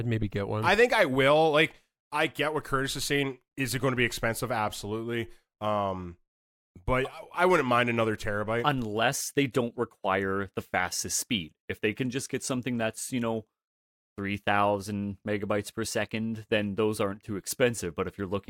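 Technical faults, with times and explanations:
Listening through this speech recording, nothing stood out as a technical problem.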